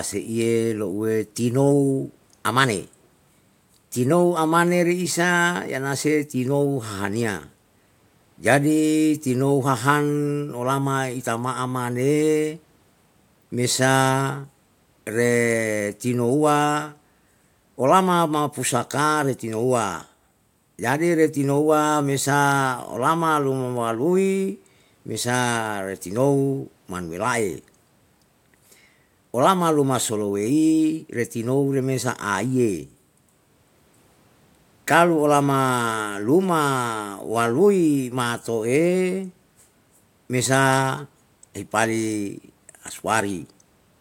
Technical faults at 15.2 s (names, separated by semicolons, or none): none